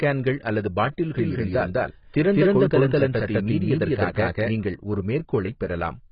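From the start, the speech carries heavy AAC compression damage, likely from a very low bitrate near 16 kbps. It sounds dull, smeared and warbly, with sibilants turned fizzy. On a spectrogram nothing appears above 5.1 kHz.

From 1.18 s to 4.52 s a doubled audio track appears, likely a second, late copy mixed in. It runs about as loud as the original and trails by roughly a fifth of a second, with no decay or room colour. The echo starts and stops abruptly, and the waveform shows each syllable repeated at that spacing.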